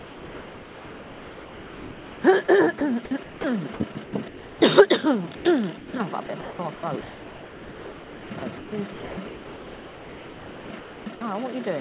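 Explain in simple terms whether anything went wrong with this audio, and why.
Yes, something went wrong, twice over. The first fault is sound dropped by the voice detector. The sending side's detector likely mistook real sound for background and stopped transmitting, so the receiver filled the gaps with artificial hiss, called comfort noise. You hear the sound give way to a steady, flat noise and then return, from the start to 2.24 s, at 2.78–2.81 s, 3.23–3.44 s, 5.36–5.45 s and 5.78–5.93 s.

The second fault is sound chopped by the voice detector. Here the same detector likely kept flipping between sending and not sending within one stretch, so quiet parts and edges were swapped for comfort noise again and again. The result sounds choppy, with repeated holes. This happens at 3.92–4.61 s and, for most of the rest of the clip, from 6.26 to 11.21 s.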